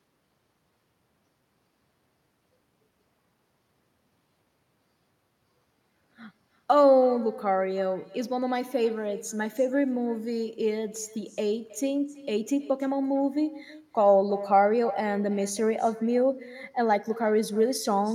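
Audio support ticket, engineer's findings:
Echo with no canceller, present throughout the speech. Every phrase is trailed by a quieter, thinner copy roughly a third of a second later, about 19 dB down. Far-end loudspeaker output is reaching its microphone. No echo cancellation removes it before the return path.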